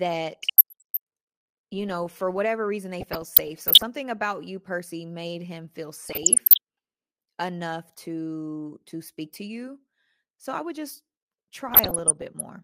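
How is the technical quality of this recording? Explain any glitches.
The speech is marred by four bursts of DAB burbling, at 0.34–0.97 s, 2.94–3.83 s, 6.06–6.58 s and 11.68–12.41 s. Residual bit errors from weak reception, around a fraction of a percent, corrupt MP2 sub-band samples and scale factors, producing short blips of noise in single sub-bands and brief jumps in sub-band level. On a spectrogram, isolated frequency bands flare briefly in short blocks.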